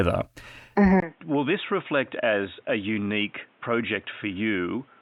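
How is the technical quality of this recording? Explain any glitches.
The recording is compromised by one clear fault. From 1.0 s to the end, the speech sounds as if the input switched to a poorer device. After a brief gap of about 20 ms, the sound turns dull and boxy, with nothing above 3.8 kHz, drops roughly 10 dB in level, and sits over a new noise floor about 35 dB down. That is likely a change of microphone or headset profile. A simple filter or codec drop would narrow the band without also changing the level and the background noise at once.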